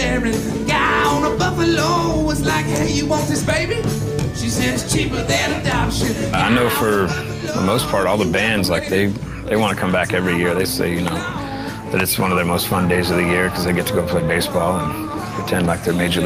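Nothing in this one goes wrong at any point; there's no glitch, dropout or distortion to point to anywhere along the way.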